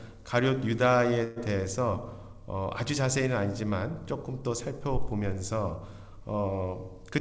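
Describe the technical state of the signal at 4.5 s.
At 4.5 s the signal is intact, with no dropout, glitch or distortion, and the only thing audible is the call path's normal character: nothing above 8 kHz, which fits a wideband codec such as G.722.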